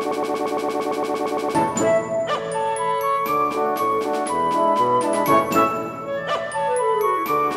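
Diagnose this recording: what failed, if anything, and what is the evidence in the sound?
Right from the top, through about 1.55 s, there's a broken-record loop: a 114 ms fragment repeats back to back, 13 times, already running when the clip opens. The playback or stream stage likely stalled and kept resending its last buffer, so the audio meant for that stretch is lost.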